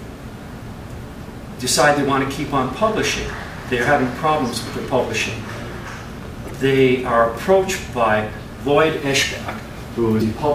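At 6.48 to 6.51 s and again at 10.18 to 10.22 s, the audio is broken by brief bursts of damaged data in a compressed stream. Bytes inside the encoded stream are wrong, so the decoder misreads those frames and has to resynchronise on the next valid frame header. Each event is a short disruption lasting a few tens of milliseconds.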